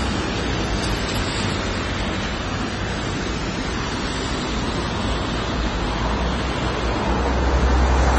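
From start to end the audio shows what is most likely AAC compression, with plainly audible codec damage. Nothing is present above 11.5 kHz, so the top octave is gone and the sound comes across dull. The encoder has coarsely quantised the spectrum, leaving smeared, warbling detail on sustained sounds and a fizzy edge on high, noisy content. The cut-off and the depth of the damage fit AAC-LC at a low bitrate, around 24 kbps.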